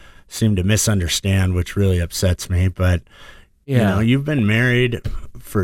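A few brief watery blips cut across the speech at about 4.39 s, just after "you know you've". That is DAB burbling. Weak reception lets bit errors, here a small fraction of a percent, slip past error correction into the MP2 data, so corrupted samples put short blips of noise into single sub-bands. The burst points to only a few damaged frames.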